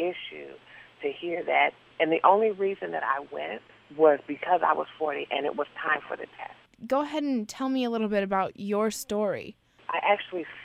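At 3.45–4.39 s and 7.97–8.57 s the sound slows about 5.7% and sags a semitone, then snaps back. That's likely a drift correction step.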